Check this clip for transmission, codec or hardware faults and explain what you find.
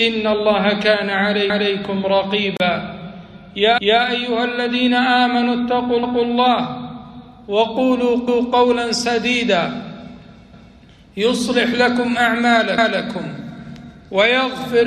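Two kinds of fault are present: a recurring overlapping-chunks stutter and a single gap at a join of encoded pieces.

Overlapping chunks occur at 1.50, 3.78, 6.03, 8.28, 10.53 and 12.78 s. At each join, the same quarter-second of sound (250 ms) plays twice before the audio continues. Each 2 s chunk began 250 ms before the previous one ended, so the tail is repeated. The result is a regular stutter or click about every 2.25 s. What distinguishes it from a dropout is that nothing is missing and nothing falls silent. Material is duplicated, and the steady spacing points to fixed-size chunking.

The gap at a join of encoded pieces runs from 2.57 to 2.60 s. It is a single gap of 32 ms that opens in continuous sound, with smeared edges, after which the sound resumes exactly where it stopped. Two separately encoded segments were joined without trimming the encoder's start-up delay and end-of-frame padding, so that dead time stays in. 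Unlike the chunk overlap, it removes nothing and repeats nothing, and it happens only once rather than at a regular interval.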